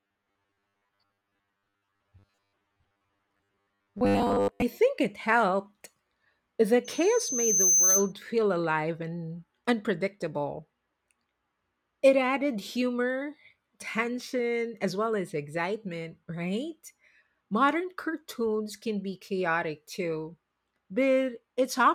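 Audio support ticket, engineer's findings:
Robotic sound from repeated short buffers, 0.01–4.63 s, ending before "think it helped". Rigid metallic 100 Hz buzz over speech. Likely starved playback buffer looping 10 ms chunks; most of the real audio skipped, repeats imposing fixed pitch.

Loudspeaker feedback squeal, 6.84–8.13 s, ending before "feel alive and unpredictable". 6.2 kHz tone swelling over about a second to roughly 5 dB above speech. Mic picking up its own speaker; loop gain above unity at that frequency.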